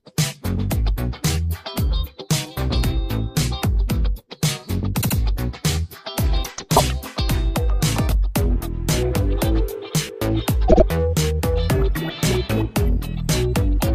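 Repeated frames at 5.00 s, 6.75 s and 10.67 s: a short block of compressed audio was decoded again, so the same slice of sound plays back to back as a stutter. At 5.00 s and 10.67 s a 78.4 ms block is heard three times in all, adding about 157 ms each, which fits three frames. At 6.75 s a 52.2 ms block repeats once, which fits two frames.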